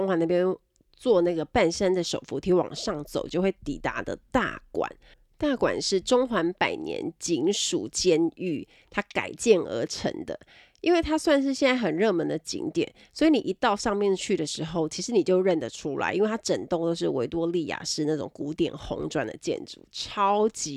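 No technical faults are audible.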